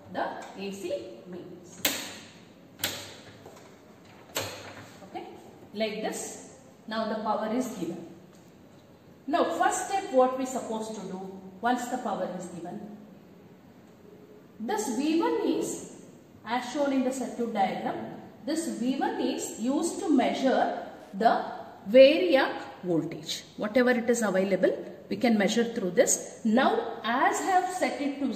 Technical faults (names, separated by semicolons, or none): Wi-Fi interference